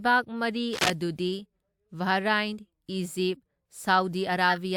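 At 0.72 s, a burst of scratchy, rustling noise cuts across the speech for about 0.18 s, ending at 0.90 s and roughly as loud as the speech itself. This is cable scratch noise, likely from a worn cable or connector being moved so its contact resistance jumped erratically.

Near the end, from 4.49 to 4.58 s, a short chirpy blip of misplaced sound appears, peaking around -15 dBFS. This is a corrupt frame decoded: a few compressed frames with damaged bits were played anyway, spraying energy into wrong frequencies.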